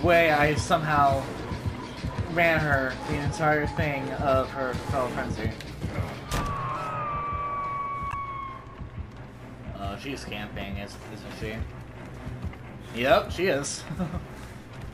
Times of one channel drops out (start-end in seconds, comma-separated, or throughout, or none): none